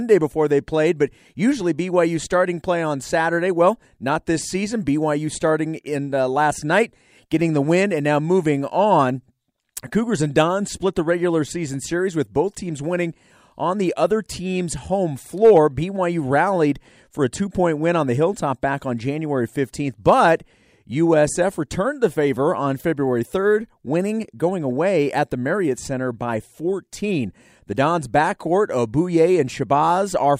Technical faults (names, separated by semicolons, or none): none